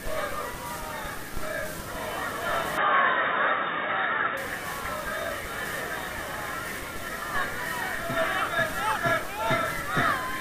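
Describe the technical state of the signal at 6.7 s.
At 6.7 s the signal is intact, with no audible fault at that point.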